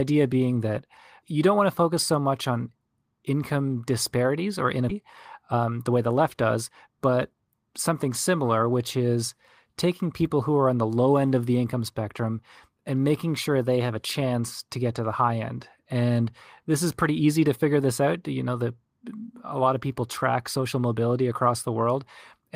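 A speech recording in which, just after "on income disparities or", playback jumps forward at 4.89 s with no gap, losing nearly half a second; this skip ahead happened because a stretch of audio was dropped while later audio was already waiting. From 5.49 to 7.15 s the speech then sounds hurried at unchanged pitch, running at 110% speed, a jitter buffer speed-up in which short pitch-period slices totalling about a fifth of a second were removed to drain excess buffered delay.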